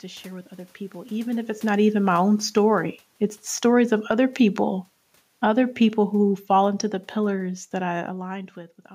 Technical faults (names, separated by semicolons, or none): automatic gain falling